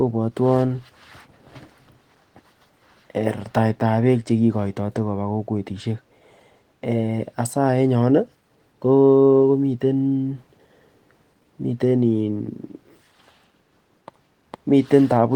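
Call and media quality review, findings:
No faults found in speech.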